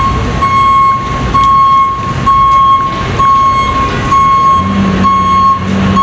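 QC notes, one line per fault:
Throughout: gain pumping. The gain ducks by around 10 dB as each loud sound arrives, so loud and quiet parts sit close in level and the audio feels squashed. The likely cause is input gain set far too high, with a fast limiter or compressor clamping on every peak. The waveform shows peaks held to an even level. The spectrogram shows all content below 8 kHz.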